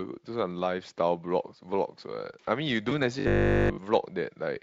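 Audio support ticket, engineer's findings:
VoIP packet loss concealed by the speech codec, 2.89 to 2.99 s. Symptom: about 20 ms of signal missing, bridged by a brief buzzy or noisy, fading tail. Fits a single dropped packet. Component: Speex decoder concealment. Mechanism: decoder extends the last pitch and filter state, gain dropping frame by frame. Weakened, smeared sound persists past the gap while the codec state recovers.

Robotic sound from repeated short buffers, 3.20 to 3.80 s. Symptom: rigid metallic buzz at 50 Hz, essentially the whole stretch affected. Component: likely the playback buffering path starving, not the codec. Mechanism: last 20 ms chunk replayed in a loop, fresh audio skipped. Repeat period sets the fixed 50 Hz buzz. Speex at 23.8 kbps shows light coding wear only.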